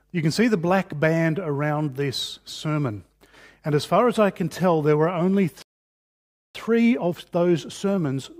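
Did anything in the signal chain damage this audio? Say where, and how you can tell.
Yes, at the playback stage. At 5.62 s the sound stops mid-flow and the output goes completely silent for about 0.93 s, resuming at 6.55 s. On a waveform this shows as an abrupt cut to a flat line; on a spectrogram it is a blank vertical band spanning every frequency, with hard edges on both sides. This is a playback stall, likely caused by the player's buffer running dry or its thread being blocked, so no samples reached the output.

From 6.55 s to the end there is time-compressed catch-up. The sound is hurried, running at about 1.15 times normal speed while its pitch stays unchanged. The player is clearing the backlog that built up during the stall by dropping small pieces and cross-fading across each join. On a spectrogram the harmonics stay at their usual frequencies but events crowd closer together in time, and the waveform shows small, regularly spaced splices.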